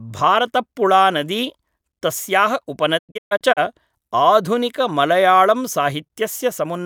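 A digital broadcast dropout runs from 2.97 to 3.59 s. The receiver stopped getting valid frames and muted, fading out over 20 ms each time. The speech breaks into several short holes totalling 320 ms, the longest 128 ms, and that material is lost.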